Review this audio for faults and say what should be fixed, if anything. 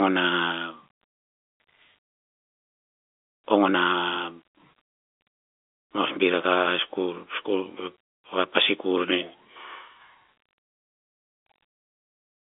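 Nothing needs fixing: the speech sits in a telephone band of about 250 Hz to 3.6 kHz with nothing above 3.7 kHz, which is simply what G.711 telephone coding sounds like, and no fault is present.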